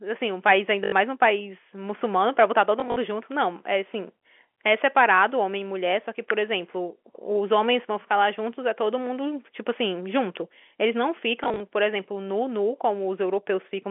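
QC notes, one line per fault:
0.84–0.92 s, 2.80–2.96 s, 11.44–11.60 s, packet loss with last packet repeated: short robotic stutters with a buzz, and small blips at 11.44 s. About 80 to 100 ms of audio went missing per event, and the receiver replayed the previous 20 ms chunk. Each repeat breaks the waveform, and the loop buzzes near 50 Hz.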